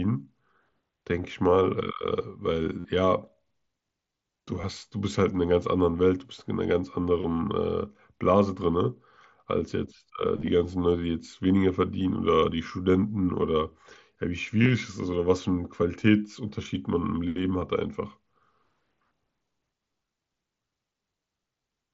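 Packets from the headset drop out, and concealed Bluetooth headset packet loss fills each gap by repeating recent waveform: at 2.80 to 2.85 s a 45 ms run buzzes, a brief 15 ms run at 4.62 s fills in the same way, a single lost packet at 17.61 s stays nearly hidden, and scattered losses over 10.37 to 10.48 s and 14.63 to 14.69 s warble slightly through the wideband mSBC sound.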